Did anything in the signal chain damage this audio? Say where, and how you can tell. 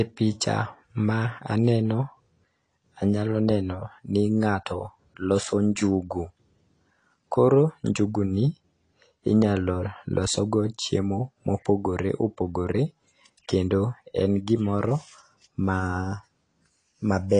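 Yes, at the codec stage. It's dull, smeared and fizzy on sibilants throughout, likely AAC compression starving high bands at something like 32 kbps.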